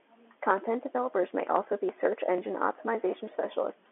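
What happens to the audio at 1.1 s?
Nothing goes wrong at 1.1 s: the speech carries on intact, with only the narrow, telephone-band sound of G.711 telephone coding that runs through the whole clip.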